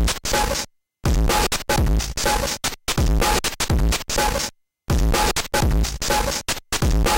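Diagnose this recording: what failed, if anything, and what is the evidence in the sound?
Nothing failed in this recording, and the sound gives no evidence of a fault at any stage.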